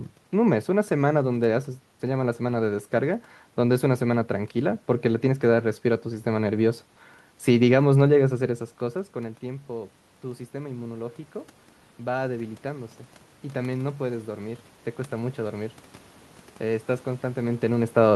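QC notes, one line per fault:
8.41 to 17.7 s, automatic gain rising. Around 8.5 s the talker moves back and the input drops by about 14 dB. The gain control climbs slowly, adding about 9 dB. The voice and the room noise swell up together.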